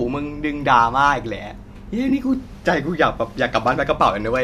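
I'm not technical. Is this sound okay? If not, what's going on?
No, there's one small glitch. From 2.09 to 2.12 s, about 20 ms, there's a brief smeared patch. That's AAC frame loss with concealment: a couple of chunks of audio went missing, likely in low-delay AAC streaming, and the player patched the gap with a guess.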